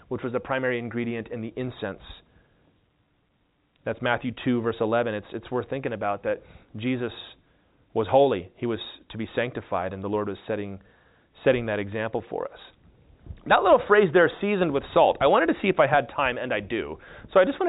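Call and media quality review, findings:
No faults found; G.711 band limit near 3.8 kHz.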